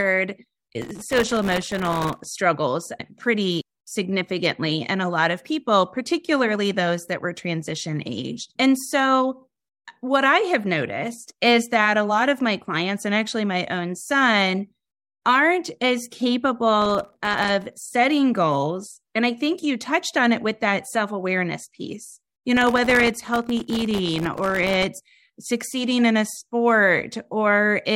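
A gritty, tearing crackle rides on the speech three times: from 0.82 to 2.26 s, again from 16.82 to 17.73 s, and from 22.57 to 24.86 s. This is processor overload crackle. The processor repeatedly missed its deadlines for very short audio buffers, each well under a millisecond. Every miss left a brief hole of silence with hard edges, and roughly 70 to 200 of these per burst in quick succession fuse into a crackle that stops once the load passes.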